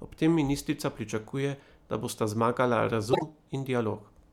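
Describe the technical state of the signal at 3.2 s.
At 3.2 s the signal shows frames out of order, spanning 3.13 to 3.23 s. Two adjacent blocks were decoded in swapped sequence, so the later stretch plays before the earlier one. The sound points to single frames of about 26 ms being exchanged. The passage comes across as a brief garbled flutter. No duration is lost, and the timeline stays aligned after the swap.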